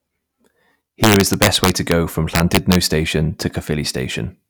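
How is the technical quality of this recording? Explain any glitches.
Two stretches of integer overflow damage the speech, from 1.04 to 1.92 s and from 2.35 to 2.75 s. The signal was driven about 4 dB and about 3 dB past full scale, and instead of limiting, the samples wrapped to the opposite sign, producing violent cracks far harsher than clipping.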